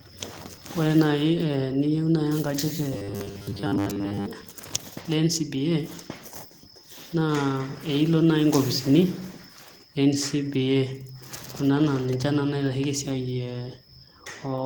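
Robotic sound from repeated short buffers runs from 2.93 to 4.26 s in this speech. Through that stretch the sound collapses into a stiff, metallic buzz at 100 Hz that still roughly tracks the speech. The likely cause is audio arriving too slowly, so the playback side loops a short slice, about 10 ms, over and over while most of the real signal in that window is dropped. The loop length sets the buzz pitch.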